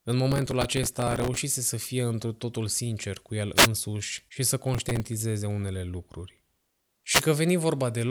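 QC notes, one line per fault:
0.32–1.37 s and 4.74–5.07 s, processor overload crackle: a gritty, tearing crackle sits on the speech for about 1.06 s leading into "să fie într totul", then for about 0.33 s between "și să" and "unele lucruri". Each tick is a missed buffer deadline where a sliver of stale audio is replayed with hard edges. The rapid regular grain points to buffers of only a few milliseconds, with dozens missed in the first burst and far fewer in the second. Unlike a radio hit, it sounds like stuttering fragments of the signal itself, not added hiss.
3.55–3.68 s and 7.10–7.23 s, wireless microphone noise hit: two short swishes of static, each about 0.13 s, rise and fall over the voice. The FM link fades as reflected radio paths cancel, so receiver noise briefly surges up and masks the signal. What separates these from the overload crackle is that they are a rush of noise with no repeated chunks of audio, and they are shorter, isolated events.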